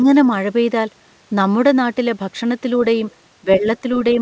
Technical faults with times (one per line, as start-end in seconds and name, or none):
0.04-0.14 speech suppressed in double talk
3.10-3.14 other side's voice leaking through
3.42-3.84 speech suppressed in double talk
3.95-4.14 other side's voice leaking through